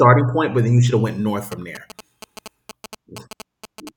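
From 1.52 to 3.89 s, after "should have went north", GSM signalling bursts cut in. Rectified phone pulses make a galloping 217 Hz buzz.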